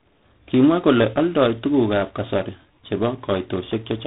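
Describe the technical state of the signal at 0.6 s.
At 0.6 s, as throughout, there's tandem speech coding. Repeated ADPCM-style passes stack their damage, so speech sounds rough, noisy and dull, with nothing above 3.9 kHz.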